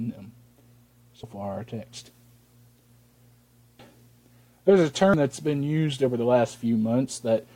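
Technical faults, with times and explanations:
1.23 s, 3.79 s and 5.14 s: damaged data in a compressed stream. Three very short glitches, each only a few milliseconds, break into the sound as clicks or chirps. At each point a stretch of the compressed stream is corrupt, so the decoder misreads or rejects those frames and loses sync until it finds the next valid frame header. The brief burst of wrongly decoded data is heard as a sharp blip before normal playback resumes.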